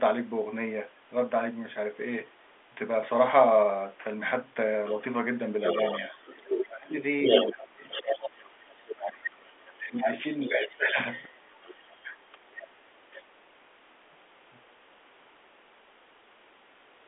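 Speech over a telephone line, band-limited by G.711 coding so that nothing above about 3.7 kHz comes through. The other side's voice leaks through at 5.64–6.65 s (around 10 dB below the talker), 7.24–8.94 s (about as loud as the talker), briefly and very faintly at 9.67–9.73 s (some 35 dB down), and at 10.26–13.24 s (around 15 dB down). The likely cause is the far end's loudspeaker output reaching the talker's microphone, with the echo canceller leaving part of that echo in the signal. The talker's speech is also suppressed in double talk at 6.1–7.84 s, dipping by roughly 30 dB over about a second in total, at 8.91–10.99 s, dropping roughly 25 dB across about one and a half seconds, and at 12.03–12.21 s, with a shallower dip of about 15 dB. Each dip overlaps a stretch of leaked far-end voice, so the likely cause is the echo canceller failing to tell near speech from echo and attenuating both together.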